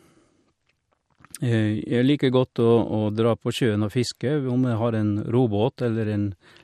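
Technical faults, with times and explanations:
Throughout: MP2 compression. The speech sounds dull and carries a gurgling, granular roughness, which is likely the work of MPEG Layer II coding at a low bitrate; the damage fits a rate around 80 kbps. Too few bits reach the 32 sub-bands, so upper bands are dropped and the remaining ones are coarsely quantised. On a spectrogram the high frequencies appear as blocky patches that switch on and off from frame to frame.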